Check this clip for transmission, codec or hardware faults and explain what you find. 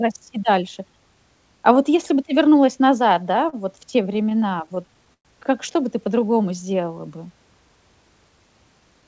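Three jitter-buffer faults stand out in this speech clip, heard through a call path whose sound stops at 8 kHz, consistent with G.722.

Repeated stalls (stutter), 3.04 to 5.27 s: packets kept arriving late, so the buffer ran dry 19 times. Each gap was bridged by extending the preceding sound, about 297 ms in total and 110 ms at most, roughly 13% of the span. Nothing is lost, but the speech drags and stutters.

Jitter buffer slow-down, 6.15 to 6.89 s: with its reserve running low, the receiver repeated single pitch periods back to back, adding 80 ms. The speech plays at 90% speed without any change in pitch, so sounds stretch out and may waver slightly.

Jitter buffer speed-up, 8.80 to 9.03 s: holding more audio than its target, the receiver cut short pitch-period pieces, a few tens of milliseconds in all. The speech runs at 113% speed with unchanged pitch, and the ending sounds hurried.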